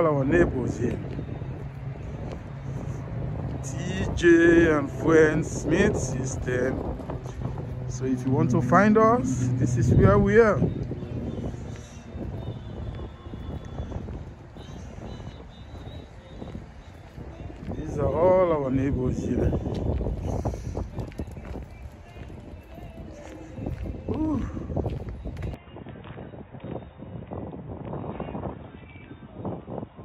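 At 25.54 s the sound turns dull, likely an input switched to a poorer device: the spectrogram empties above 3.8 kHz, and the waveform shrinks.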